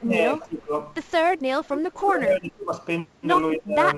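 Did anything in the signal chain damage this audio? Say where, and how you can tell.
Yes. At the converter, sample clock jitter adds a faint roughness, roughly 30 dB down, that swells on loud, bright speech and disappears in pauses, unlike steady hiss.

In the call processing, speech ducks by about 20 to 25 dB at 0.01 to 0.73 s, 1.39 to 2.73 s and 3.56 to 3.77 s. That is likely speech suppressed in double talk, where the echo canceller could not separate this talker from the loudspeaker echo and turned both down.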